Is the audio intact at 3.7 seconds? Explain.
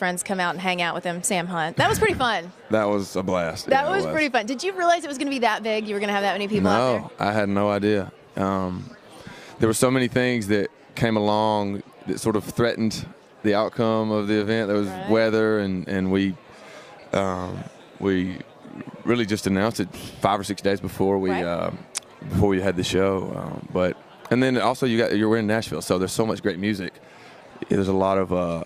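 Yes, the audio at 3.7 seconds is intact, with no dropout, click, distortion or other fault at that moment.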